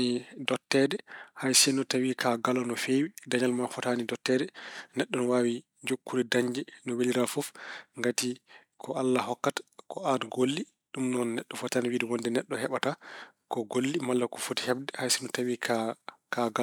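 No technical faults can be heard in this speech recording.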